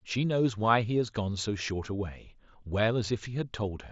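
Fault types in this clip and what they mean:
No faults can be heard in this speech recording.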